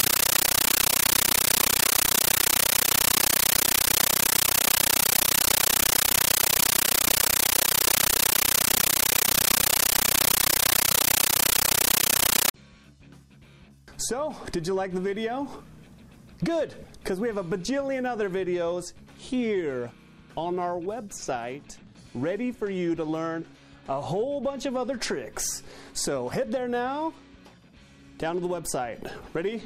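From the start to 12.54 s the clip is a blast of very loud, chattering static, a harsh rasp pulsing about 31 times a second, with each burst lasting 13.3 ms before a gap of silence. This is a compressed stream played as audio: a Dolby Digital (AC-3) bitstream, whose density points to a 640 kbps stream, reached the output as raw samples without being decoded, so each data frame sounds as a noise burst followed by zero padding.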